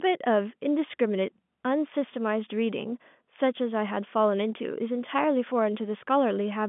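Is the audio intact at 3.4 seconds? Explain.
Yes, the audio is intact at 3.4 s; nothing breaks or drops out there, and the speech carries only the narrow telephone band of G.711 coding, with no content above about 3.8 kHz.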